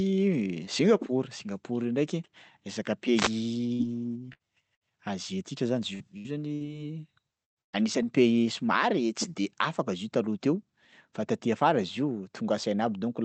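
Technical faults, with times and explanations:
3.14–3.31 s, wireless microphone noise hit: just after "io ndraiky resaka", a brief swish of static sits over the speech for about 0.17 s. The analogue FM radio link from the microphone briefly lost strength as reflected copies of the signal cancelled the direct one. With less signal reaching the receiver, its own hiss rose before the link recovered.
3.73–4.84 s and 5.95–8.06 s, repeated packet loss (robotic sound): in both stretches the speech turns choppy. The first has three dropouts totalling about 0.18 s, the longest 61 ms. The second has six dropouts totalling about 0.4 s, the longest 114 ms, roughly a fifth of that stretch. Each missing piece was filled by extending the last received sound. Because the fills come close together, these smeared, buzzy patches give the stuttering, robotic quality.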